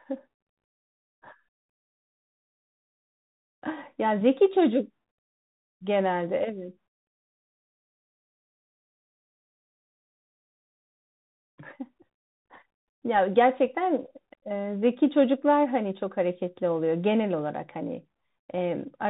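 Speech passed through a Bluetooth CVSD headset codec, audible from start to finish. Nothing above 4 kHz survives, so the sound is narrowband and boxy. The damage is plainly audible: CVSD encodes a single up-or-down bit per sample, which fits a 64 kbps link, and its adaptive step cannot keep pace with loud, fast high-frequency content. That slope overload turns sibilants scratchy, and the constant up-down bit toggling leaves a granular hiss beneath the speech.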